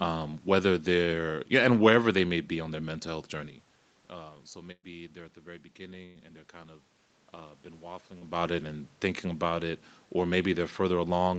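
Speech with two bursts of packet loss, at 4.71–4.86 s and 6.06–6.19 s, where about 120 ms and 100 ms go missing. The receiver extends the last sound as a fading buzz or hiss, with a brief silence in the first gap. A short concealed packet loss at 8.18–8.24 s drops about 40 ms, and the concealment leaves a brief smear before the real audio blends back in.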